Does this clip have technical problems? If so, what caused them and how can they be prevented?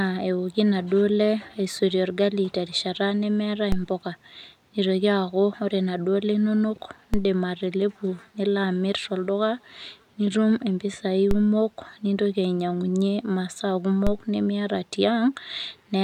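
Yes. The speech carries four DC steps, each heard as a short, low thump at 3.72, 7.14, 11.31 and 14.07 s while the speech continues unaffected. At each point the waveform's zero line jumps suddenly by about -13 dBFS, and that abrupt shift is what produces the thud. The offset doesn't hold; it bleeds away as if through a 5 Hz high-pass, so the baseline sags back toward zero over a fraction of a second. Such steps arise when a converter recalibrates or an input carrying an offset is switched into the path. Preventing them means keeping converter recalibration and input switching out of live recording and AC-coupling or high-passing offset-bearing inputs before they reach the signal path.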